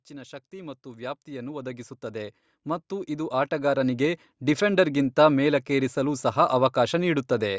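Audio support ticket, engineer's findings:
Automatic gain rising, 0.07 to 4.89 s. Speech and background swell together, about 18 dB overall. Probable component: AGC stage in the capture chain. Level read as too quiet, so gain ramps up slowly over nearly 5 s. Call microphone processing is audible as a ceiling near 8 kHz.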